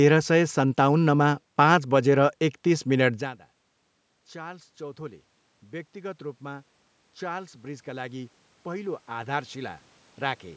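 From 5.99 s to 10.5 s the automatic gain rising fault appears: the input level falls by about 22 dB, so the call's gain control slowly lifts its gain by about 8 dB, and speech and room noise swell together. On a waveform the envelope and the noise floor climb gradually in step.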